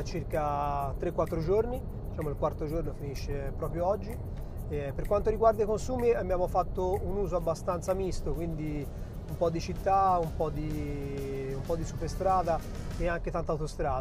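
No technical faults can be heard anywhere in the recording, and the signal holds steady throughout with no breaks, distortion or dropouts.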